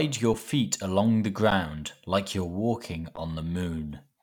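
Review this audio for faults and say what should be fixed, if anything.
The speech stalls three times with an underrun with held sample, at 0.34 s just before "feet along", then at 1.50 s and 3.16 s. The output ran dry and the converter held its last value for roughly 5, 11 and 12 ms, so the waveform sits flat before picking up softly where it left off. The first two gaps fit 256- and 512-sample buffers. A bigger output buffer or more scheduling headroom should fix it.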